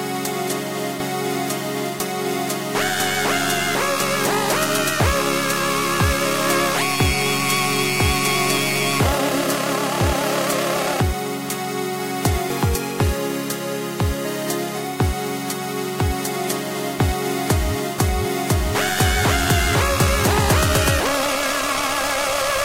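No technical faults can be heard anywhere in the audio, and the signal stays steady and intact throughout.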